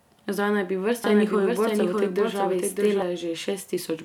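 From 1.04 s to 3.02 s, just after "naj bi", a doubled audio track appears. A second full-band copy of the speech trails by roughly 0.7 s at about 5 dB lower, with no decay or room colour, and switches in and out abruptly. It is likely a second, slower capture path mixed in.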